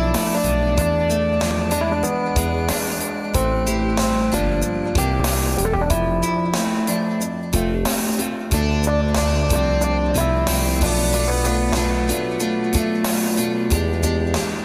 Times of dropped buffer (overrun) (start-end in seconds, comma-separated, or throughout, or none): 0.35, 1.51, 4.34, 5.20, 11.73